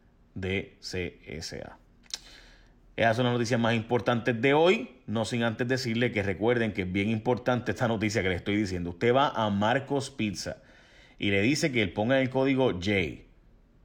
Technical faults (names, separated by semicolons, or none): none